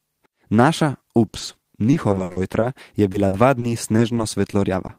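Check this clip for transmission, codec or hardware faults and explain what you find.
Repeated packet loss (robotic sound) affects the speech in three stretches: 1.27–1.64 s, 1.91–2.64 s and 3.12–4.91 s. Lost or late packets leave short holes, each bridged by extending the preceding sound, with gaps up to 60 ms. About 29%, 29% and 9% of each stretch is patched, producing choppy speech with fragments missing.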